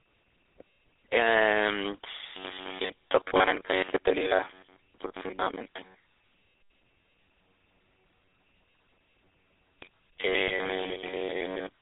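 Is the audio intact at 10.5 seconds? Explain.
No, not quite. Around 10.48 to 10.53 s there's a lost GSM frame, which fits a single 20 ms frame dropping out. The decoder covers the gap by replaying the last good frame's settings, so you get a brief rough, metallic ring rather than a clean gap.

That sits on top of the GSM full-rate codec, which runs through the whole clip, 10.5 s included. It rebuilds speech from a vocal-tract model fed by sparse regular pulses, at 13 kbps in a 300 Hz to 3.6 kHz band, giving a plainly audible buzzy, gravelly edge.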